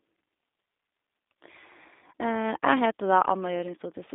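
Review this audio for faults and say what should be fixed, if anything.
The whole clip carries G.729 codec damage, plainly audible: the speech is rebuilt from a vocal-tract filter, pitch predictor and sparse pulses, so it sounds rough and slightly synthetic. The band runs roughly 250 Hz to 3.7 kHz, with nothing above 3.8 kHz, consistent with an 8 kbit/s stream. To prevent it, capture or route the call through a wideband codec at a higher bitrate rather than G.729.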